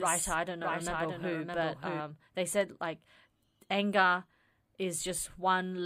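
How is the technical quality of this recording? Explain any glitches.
The recording has one glitch at the start. A doubled audio track runs from the opening to 2.0 s, ending abruptly just before "they said like". A second, somewhat quieter copy trails the speech by roughly 0.7 s, with no decay or room colour. This is likely a slower parallel capture path or an out-of-step edit mixing the same audio in twice.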